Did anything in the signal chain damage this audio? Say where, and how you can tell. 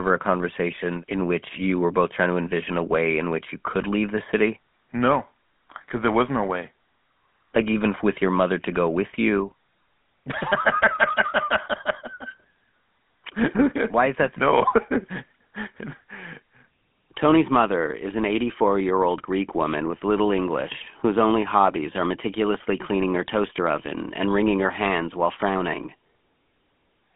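Yes, at the codec stage, throughout. The speech has a buzzy, gravelly roughness and nothing above 3.7 kHz. That fits the 13 kbps GSM full-rate codec's pulse-driven vocal-tract model.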